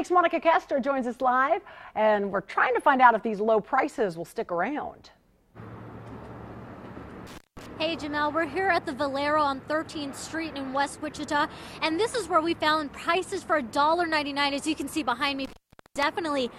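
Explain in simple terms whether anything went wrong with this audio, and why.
Yes. Intermittent contact cuts the sound twice, at 7.27–7.66 s and 15.45–16.03 s. A loose plug briefly opens, and unlike a clean digital dropout, each gap starts and ends with crackle.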